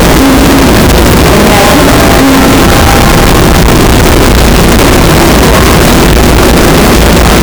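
From start to finish the everyday sounds come through as a loud, harsh, nearly square waveform sitting at an almost fixed, high level, with quiet passages and background noise as loud as the main events. This is float read as integer, likely 32-bit float samples interpreted as 32-bit integers, so sign and exponent bits dominate each value. Unlike ordinary clipping, the level stays pinned regardless of how soft the source was, while the pitch contour remains traceable.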